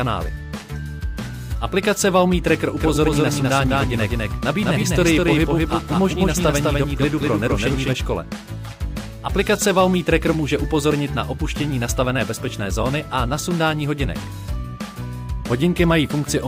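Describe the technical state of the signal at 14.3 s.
At 14.3 s the signal is intact, with no audible fault present.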